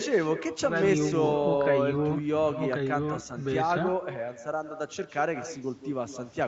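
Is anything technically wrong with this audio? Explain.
Yes, there is an echo with no canceller running through the whole clip. At the far end of the call the speech played from a loudspeaker and was picked up again by the microphone, and nothing was there to subtract it. That copy returns after a network round trip of roughly 150 ms, about 12 dB below the original, so every phrase is trailed by a fainter, thinner duplicate. The call path itself limits the sound to 8 kHz.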